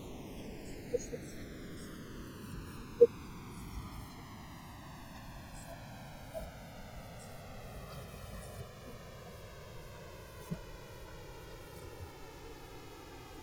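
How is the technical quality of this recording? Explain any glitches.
The recording has one fault, present from start to finish: a slow, sweeping flanging on the speech, caused by the channels drifting apart. The two channels came from separately clocked devices, roughly 150 ppm apart, so the offset between them creeps up to around 3 ms. Summed to mono, this drives comb-filter notches gradually through the spectrum.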